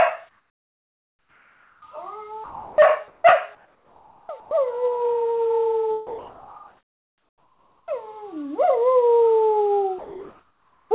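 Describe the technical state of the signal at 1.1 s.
Comfort noise in place of the background covers 1.1 s, within a span from 0.29 to 1.82 s. The quiet background, which sits about 43 dB below the loud passages, gives way to a steady, featureless hiss about 5 dB quieter, with its natural detail gone. The likely cause is discontinuous transmission: the sender paused sending during silence, and the receiver filled the gap with synthetic noise shaped to the background's rough spectrum, band-limited like everything else to below 4 kHz.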